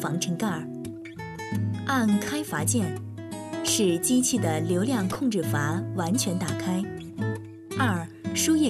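At 5.13 s, running to 5.18 s, a corrupt frame is decoded: damaged bits in the compressed stream were played as valid data across several consecutive frames, misplacing energy in frequency. The result is a brief burst peaking around -20 dBFS.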